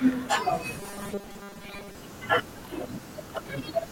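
From 0.8 to 1.95 s the speech collapses into a rigid, metallic buzz pitched at 200 Hz. It still traces the rough shape of the words but loses their natural inflection. This is robotic sound from repeated short buffers, and the likely cause is audio arriving too seldom, so the software loops the last fragment to fill the gap. A 200 Hz buzz fits a repeated slice of about 5 ms, and roughly two-thirds or more of that stretch is repeats rather than fresh audio.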